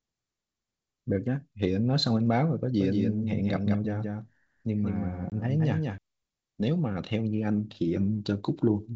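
From 2.80 to 5.98 s, a second, slower capture path likely mixed in a copy, creating a doubled audio track: the speech repeats about 5 dB quieter, roughly a fifth of a second behind, starting and stopping abruptly. At 5.30 to 5.34 s, packet loss on an ADPCM call drops about a single packet, leaving a 20 ms silent hole. The decoder's predictor loses step, so the speech returns with brief distortion against the clean G.722 wideband telephone coding.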